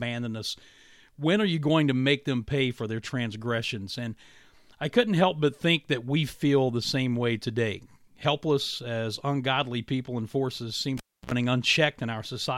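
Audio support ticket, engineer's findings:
Pop at 10.97 s after "people and forces seem", 0.29 s near silence, 62 ms 60 Hz buzz, pop at 11.31 s. Cable pulled and plugged in; tip touching before ground.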